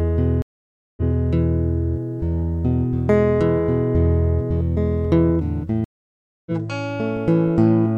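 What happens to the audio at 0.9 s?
A stream reconnect runs from 0.42 to 1.15 s. The connection dropped, leaving about 0.55 s of silence, and a fresh decoder restarted mid-stream. The music resumes 0.19 s earlier than where it broke off, so a short stretch repeats.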